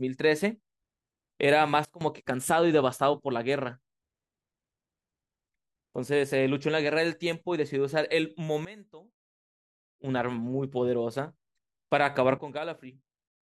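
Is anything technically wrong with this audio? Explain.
Yes. The speech has sudden gain jumps. The level drops abruptly by about 19 dB at 1.85–2.01 s, about 18 dB at 8.65–10.04 s, and about 12 dB from 12.38 s to the end. Speech and background noise fall together, likely from an unramped digital gain change.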